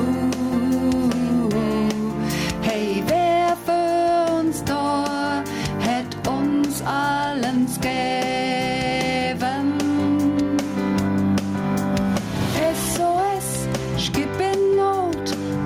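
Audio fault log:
throughout, gain pumping: The input gain is likely set far too high for the microphone, so a fast limiter or compressor clamps down hard whenever a loud sound arrives and then lets go in the pauses. The level swings by around 15 dB. Loud and quiet passages sit unnaturally close together, leaving the whole clip squashed and breathing.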